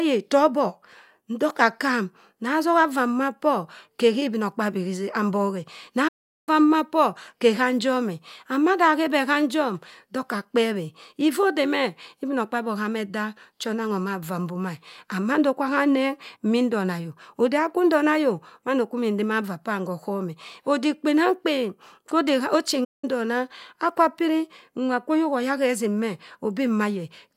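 At 6.08 s the speech cuts out and the output is silent until 6.49 s, a gap of about 0.39 s. A second, shorter dropout runs from 22.84 s to 23.04 s, about 0.18 s, after which the speech resumes with "ndona akwa piri nwa". Both are abrupt silences in mid-flow, likely a playback stall in which the player ran short of buffered data or its output thread was blocked until it recovered.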